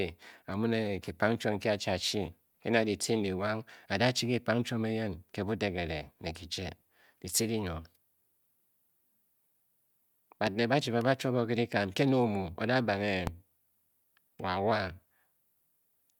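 A loud pop strikes at 10.47–10.49 s, just before "ba chi ba ba", and again at 13.27–13.30 s. Each is a single sharp click about 15 dB above the speech, likely from a voltage spike such as a switch, static discharge or driver glitch, while the speech continues underneath.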